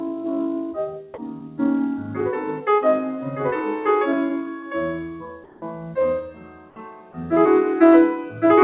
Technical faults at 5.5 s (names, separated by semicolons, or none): noise suppressor applied to music or sounds; sound cut by the noise suppressor; comfort noise in place of the background